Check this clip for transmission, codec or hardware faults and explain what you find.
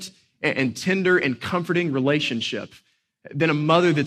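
No transmission, codec or hardware faults are audible anywhere in this speech recording.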